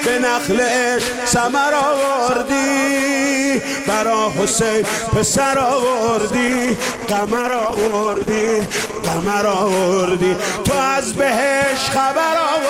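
At 6.49 s a call bitrate drop sets in: the link's bandwidth estimate falls, and the encoder is forced to code with far fewer bits, consistent with a fall from about 48 kbps to around 13 kbps. The sound turns coarse and watery, and the top end is cut away, leaving it muffled. It stays at this low point for about 2.85 s before the bitrate recovers and fuller detail returns at 9.41 s.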